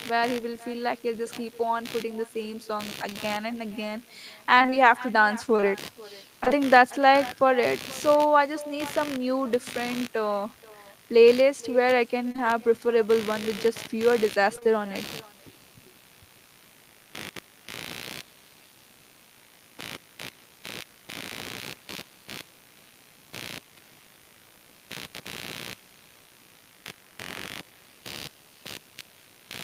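Computer activity noise runs through the whole speech clip: a buzz pulsing at around 70 Hz, roughly 20 dB below the speech. Processor, graphics or mouse load is modulating the audio circuit's shared ground, so the buzz tracks machine activity rather than the speech.

An echo with no canceller is also present throughout. The far end's loudspeaker feeds its microphone and nothing subtracts it, so each phrase returns about half a second later, about 22 dB down, thinner than the original.

At 3.09 s and again at 3.13 s, running to 3.17 s, there is short concealed packet loss. Two consecutive 20 ms stretches never arrived, and the decoder extended the preceding sound to cover them, leaving a brief smear before blending back into the real signal.

Repeated packet loss (robotic sound) first appears from 4.59 to 6.52 s, where eight separate gaps, none longer than about 23 ms, are each patched by continuing the last sound. 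The result is choppy. Shorter bursts of three gaps each occur from 12.28 to 12.40 s and from 14.56 to 14.67 s. Nearly half of each of these spans is synthesised, so the robotic quality is denser there.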